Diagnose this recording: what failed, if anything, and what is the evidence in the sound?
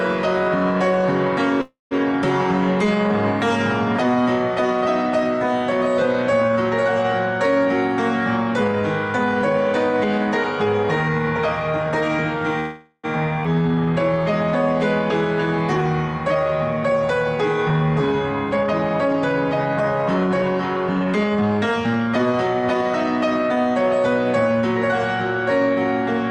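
Call audio freeze, at the network and jitter-buffer stage: at 1.61–1.93 s and 12.60–13.06 s the sound continues as a fading buzz, decaying to about 160 ms of silence in the first case and 20 ms in the second. It then resumes where it stopped. The likely cause is late packets draining the buffer. Unlike a skip, nothing is lost; each event adds about 0.3 s and 0.44 s of delay.

Jitter buffer speed-up, in the receiver's buffer management: from 7.65 to 12.36 s the audio runs at 104% speed, shedding roughly 0.2 s. From 16.34 to 23.57 s it runs at 107%, shedding roughly half a second. The pitch stays put, which rules out a sample-rate mismatch; the buffer is trimming pitch periods to reduce accumulated delay.

Skip ahead, at the network or buffer stage: at 13.43–13.47 s the playback jumps forward, leaving about 150 ms of audio missing. The two sides are joined almost directly with only a 13 ms fill. 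This distinguishes it from a freeze, which inserts a gap and keeps everything.

Jitter buffer slow-down, in the receiver's buffer: from 13.55 to 13.94 s the audio stretches to 81% speed, adding 85 ms as the buffer rebuilds its reserve. Repeated pitch periods draw the sound out at unchanged pitch, where a clock drift would shift the pitch as well.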